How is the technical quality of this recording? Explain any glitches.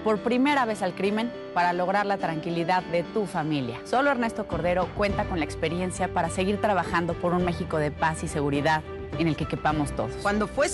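No glitches can be heard anywhere in this recording.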